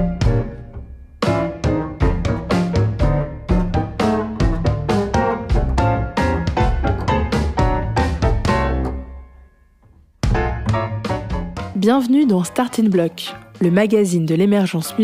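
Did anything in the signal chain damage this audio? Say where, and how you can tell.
Yes, at the sample-rate converter. From 10.25 to 13.5 s there's a steady 4 Hz ticking: the resampler restarted on every 250 ms block, glitching each edge.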